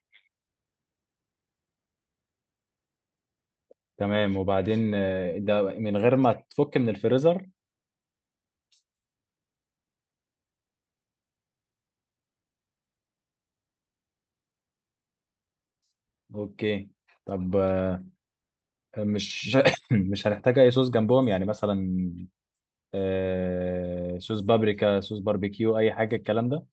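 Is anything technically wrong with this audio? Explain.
No, no technical faults.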